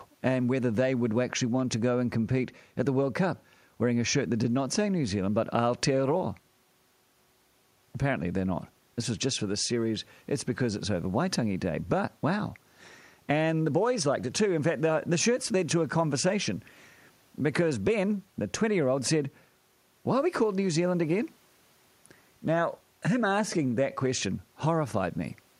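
No technical faults can be heard anywhere in the recording.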